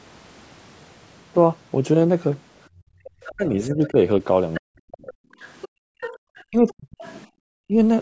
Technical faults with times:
2.69-3.01 background gated by the echo canceller
3.05-7.15 other side's voice leaking through
3.29-5.24 speech suppressed in double talk
5.68-6.22 background gated by the echo canceller
6.50-7.73 speech suppressed in double talk
7.33-7.39 background gated by the echo canceller

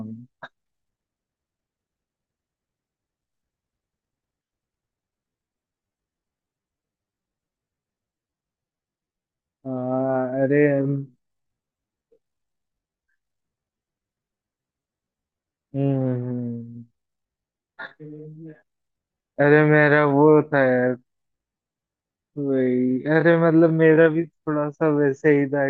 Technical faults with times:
5.14-25.70 time-stretched section

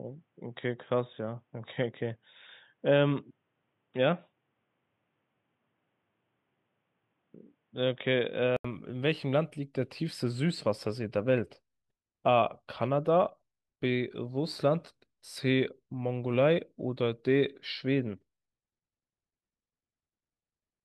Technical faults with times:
0.00-8.64 input switched to a poorer device

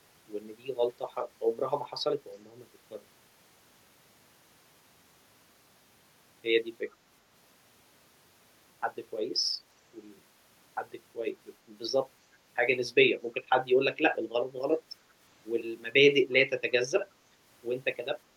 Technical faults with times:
6.91-6.96 echo leak
13.33-13.42 echo leak

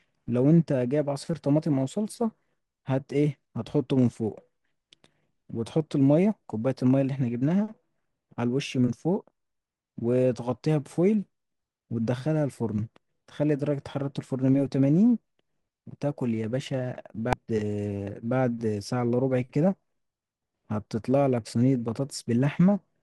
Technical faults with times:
17.33 damaged data in a compressed stream

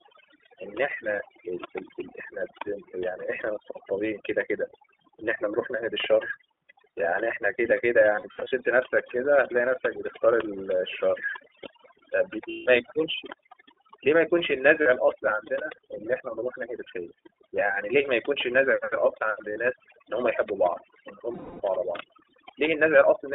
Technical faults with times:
0.00-23.34 overdone noise removal
0.00-23.34 iLBC codec
8.16-8.54 lost iLBC frames
12.49-12.69 lost iLBC frames
14.82-14.88 lost iLBC frames
19.52-19.58 lost iLBC frames
21.34-21.62 lost iLBC frames

